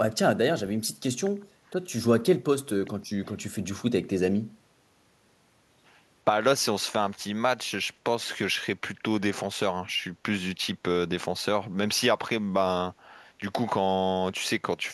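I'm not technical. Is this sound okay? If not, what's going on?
No. From 1.66 to 1.70 s, a very faint copy of the speech trails about 0.37 s late: an echo leak, likely a loudspeaker's echo canceller missing some sound.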